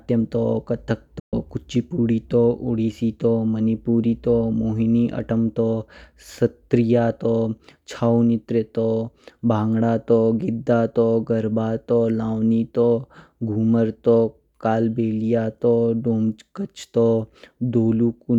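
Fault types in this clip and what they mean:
Digital broadcast dropout: the receiver hit bad frames and muted, so the speech fades out in 8 ms at 1.19 s and stays gone until 1.34 s.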